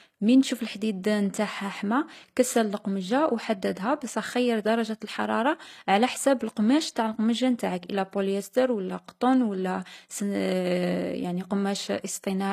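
HE-AAC compression throughout the speech: the treble, which stops at 14.9 kHz, sounds likely rebuilt from copied lower bands, leaving s sounds gritty and lispy, consistent with a low bitrate around 24 kbps.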